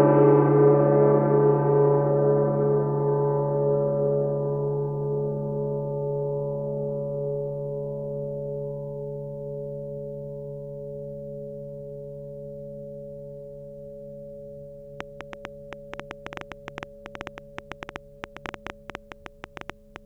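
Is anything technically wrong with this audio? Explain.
Yes. From 15.01 to 19.97 s, a train of clicks ticks and pops over the music at about 8.3 per second, unevenly spaced, some forty in all, standing well above the signal. Likely interference from nearby equipment, or a faulty connection or power supply, is injecting repeated similar pulses.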